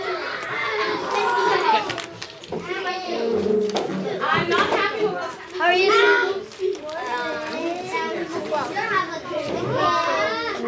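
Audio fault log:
No technical faults are audible anywhere in the signal.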